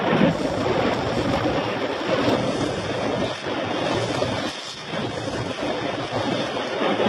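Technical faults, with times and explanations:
2.35 s to the end, adaptive stream at a lower bitrate: the stream drops to a lower-quality version with no gap. From there nothing is left above 11.8 kHz, and the top end turns swirly and synthetic, which fits a switch from plain AAC at around 96 kbit/s to HE-AAC at around 16 kbit/s. That squeezed version keeps only the lows and rebuilds the treble from a rough sketch, probably because the connection slowed.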